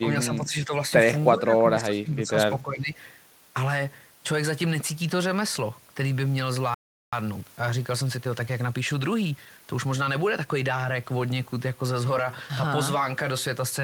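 Speech with three distinct faults. In the first three seconds the voice repeatedly ducks, at 0.00 to 0.07 s, 0.25 to 0.73 s, 1.33 to 2.35 s and 2.61 to 2.97 s, typically by about 10 dB and by about 15 dB at the deepest. The pattern is most likely speech suppressed in double talk, with an echo canceller attenuating the voice while it overlaps the far end. Because the level sags rather than dropping to silence, it differs from a dropout. At 6.74 s the sound stops dead for about 384 ms until 7.13 s, then resumes. That full gap is likely a playback stall, with the player starved of data, and it differs from suppression by being true silence. From 7.13 to 10.13 s the audio runs about 1.1 times faster at unchanged pitch. That is time-compressed catch-up clearing the backlog, and unlike a simple speed-up it keeps the pitch constant.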